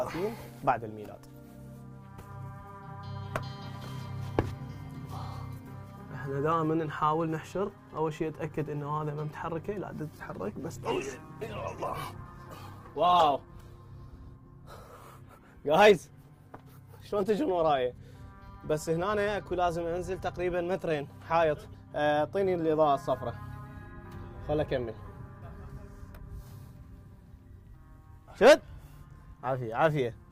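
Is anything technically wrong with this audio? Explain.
Yes. From 10.15 to 17.97 s, a call bitrate drop makes the sound rough, watery and muffled, fitting an encoder starved from 64 kbps to 11 kbps, bottoming out for about 3 s.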